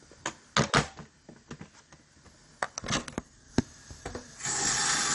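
Throughout, the sound is dull, with nothing above 11.3 kHz and a gurgling, granular texture. This is likely MP2 compression, consistent with a low bitrate around 48 kbps.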